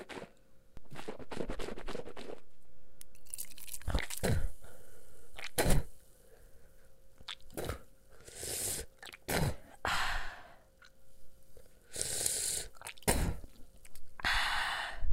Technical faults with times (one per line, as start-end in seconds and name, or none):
0.77-5.79 DC step